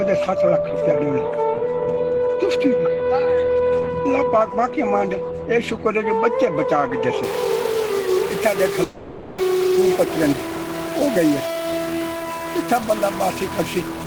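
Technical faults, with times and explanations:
7.24 s to the end, stuck bit: a grainy or buzzy distortion appears and stays, and the pauses fill with noise instead of going quiet. That pattern points to one data bit likely stuck at a fixed value, unlike clipping, which only distorts the loud peaks.
8.83 to 9.42 s, long network dropout: the sound gives way to a continued, fading buzz for close to 0.6 s with no true silence, then resumes with about 0.4 s of material missing. This likely comes from lost network audio. Packet loss concealment can only extend the last sound, which fades over a gap this long.
9.53 to 12.49 s, jitter buffer speed-up: the audio runs about 5% fast at unchanged pitch and sounds slightly hurried, as the receiver trims short pitch-period slices to shed roughly 150 ms of built-up delay. Resampling, by contrast, would raise the pitch along with the speed.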